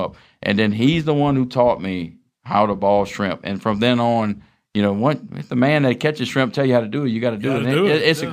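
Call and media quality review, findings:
Imaging from linear upsampling throughout the speech. Faint metallic shimmer on sibilants, dulled top end. Probable resampler: 22 kHz to 48 kHz by straight-line interpolation, leaving a mirror image at 11.025 to 22.05 kHz, about 40 dB down. Unlike aliasing, nothing folds below the original band.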